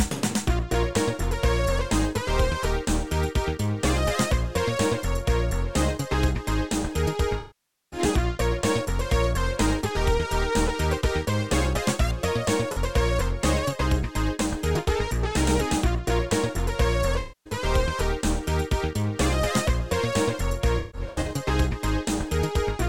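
AAC frame loss with concealment occurs four times, as the decoder loses frames and patches each gap by extending the last good spectrum and fading it down. At 7.39 s roughly half a second goes, about 25 frames' worth, so the sound decays toward silence and returns by 7.99 s. At 12.72 s a brief 43 ms loss leaves a smeared, phasey blip. From 17.2 to 17.53 s a 256 ms stretch of frames is lost. Between 20.78 and 21.28 s scattered losses, the longest around 150 ms, cause repeated blurred dropouts.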